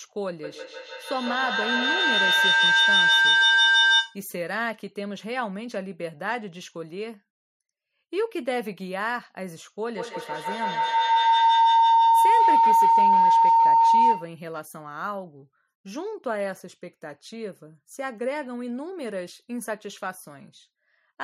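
From 0.43 to 4.26 s and again from 9.97 to 14.39 s there's feedback howl: a mic-to-speaker loop keeps gaining, building a tone near 1.5 kHz, then around 1 kHz, pulsing every 150 ms or so and peaking about 10 to 11 dB above the speech.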